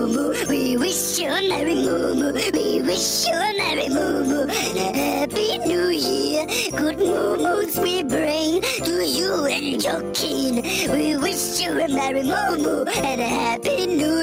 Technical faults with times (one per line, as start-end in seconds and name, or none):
0.00-14.22 gain pumping